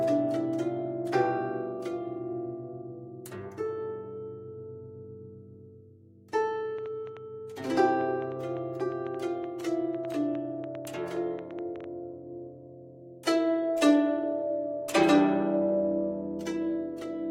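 From 6.79 s to 11.85 s a train of clicks sits over the sound: around thirty similar pops at an uneven pace of about 5.5 per second, peaking roughly 5 dB above the signal. Likely cause is interference from nearby equipment, or a faulty connection or power supply.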